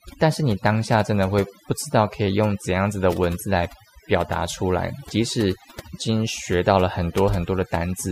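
Across the whole clip, the speech carries overdone noise removal. A noise reduction stage pushed too hard is cutting individual frequency bands down or out whenever their level sits close to its noise estimate, so the quieter parts of the voice are removed along with the noise. Between phrases the background drops to near silence dotted with twinkling specks. Unlike a simple noise gate, which mutes everything at once, the damage here is scattered band by band.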